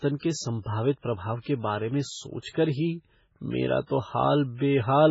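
From start to finish, heavy MP3 compression damages the speech. Nothing sounds above 7.6 kHz, so the treble is dull. Weak frequency lines flicker between frames, giving a watery, swirly texture. S sounds chirp metallically. This most likely reflects a very low bitrate, around 16 kbps.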